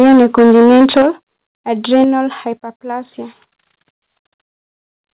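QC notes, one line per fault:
0.00–1.07 s and 1.93–2.04 s, microphone overload: the peaks get squared off hard, about 10 dB over in the first stretch with nearly a third of samples flattened, then about 3 dB over with a small share clipped. That gives the loudest syllables a harsh crackle, likely from input gain set too high.
1.02 s, 2.04 s and 3.06 s, microphone volume stepped down: the level drops suddenly by about 9 dB, then about 6 dB, then about 1 dB. The first two land at the tail end of the clipped bursts, likely the call software pulling the mic gain down in one step each time. Each drop sits within the narrow 4 kHz call-band sound.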